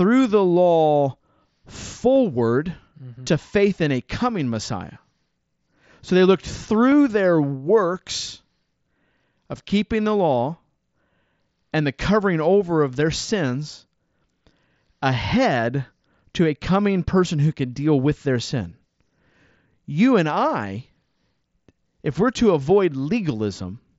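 At 2.15 s and 6.92 s, concealed Bluetooth headset packet loss removes single 7.5 ms frames, each patched with copied recent waveform and nearly hidden. From 13.26 to 13.28 s, a 22.5 ms run, which fits three lost frames, buzzes briefly, warbling as audio resumes.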